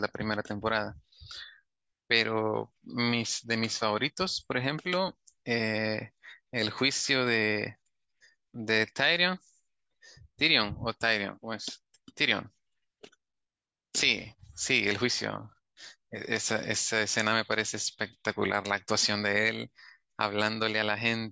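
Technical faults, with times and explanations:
No technical faults detected.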